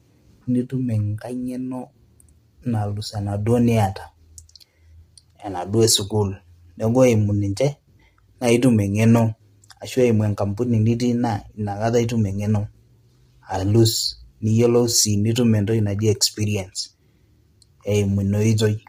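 From start to finish, the speech sounds rough and grainy. A hiss fills the gaps between the harmonics of the voice. The top band is thin and synthetic. The likely cause is low-delay AAC compression, the AAC-ELD codec used in video calls. Its short frames cannot resolve pitch harmonics cleanly and need more bits. The damage is heavy, which fits a low bitrate near 24 kbps.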